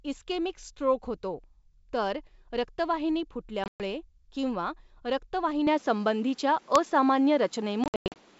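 Packet loss on an ADPCM call strikes at 3.64 to 3.81 s, just after "स्ट्रोक होतो तर रक्तवाहिनी": about 140 ms of audio drops out across 160 ms, the longest gap 120 ms. The decoder's predictor and step size lose track of the sender's, so the speech returns from each hard-edged silence slightly distorted before recovering.

At 5.67 s the sound abruptly turns duller and more boxy, with a faint new noise floor about 35 dB below the speech, and a level shift of about 5 dB, all with no gap. This is likely an input switched to a poorer device in mid-call.

The same packet loss returns at 7.84 to 8.19 s, with about 240 ms lost across 360 ms and the longest run 100 ms, leaving choppy holes and slightly distorted speech as the decoder re-syncs.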